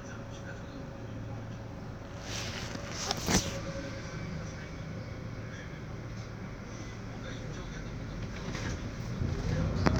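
No technical faults can be heard anywhere in this sound.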